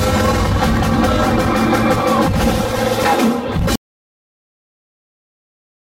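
At 3.59 s a tiny skip interrupts the sound, where a few milliseconds drop out and the waveform jumps. This is an overlap between stream segments: two segments' time stamps overlapped, so the player trimmed material that was never actually duplicated, which fits a stream split into 4-second segments. From 3.76 s to the end the audio cuts out into a dropout to total silence with no room tone at all, likely because the input was lost while the recorder kept writing silence.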